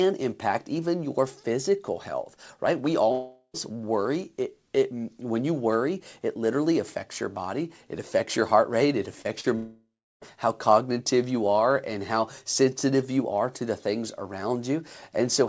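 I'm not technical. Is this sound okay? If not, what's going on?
No. There are two kinds of problem.

First, a long network dropout. At 3.12 to 3.56 s the sound turns into a fading buzz for a little under half a second, then briefly goes quiet before picking up again at "worry it". At 9.55 to 10.23 s the same happens for about two thirds of a second, with the final half or so silent, and the sound resumes at "how cognitive you are". The likely cause is that the connection stopped delivering audio. The receiving end stretched the last sound to cover the gap, and what was lost never came back.

Second, short concealed packet loss. Just before the second dropout there are two quick glitches, at 9.22 and 9.40 s. Each lasts about five hundredths of a second and sounds like a tiny smear or wobble. Small pieces of the audio arrived too late, and the receiver patched each hole by continuing the sound from just before it, then blended back into the real audio.

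The sound stops at 8 kHz, so it's a little dull. That fits the G.722 call codec it went through.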